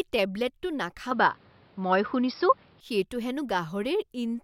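Input switched to a poorer device, 1.11 to 2.81 s: the speech abruptly dulls, with nothing above 5.5 kHz, shifts in level, and gains faint new hiss, likely from a different microphone.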